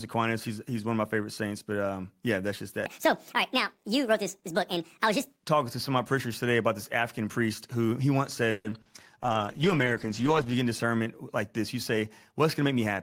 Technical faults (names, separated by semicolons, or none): section at the wrong speed; call audio freeze; short concealed packet loss; call bitrate drop; jitter buffer speed-up